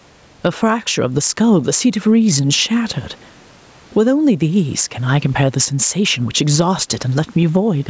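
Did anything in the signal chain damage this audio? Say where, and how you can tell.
Yes. Gain pumping runs through the whole speech clip: the gain swings by around 15 dB, and loud and quiet syllables sit squashed close together. This is likely input gain set far too high ahead of a fast limiter or compressor in the call processing. A noise gate would instead cut the background to silence in the gaps.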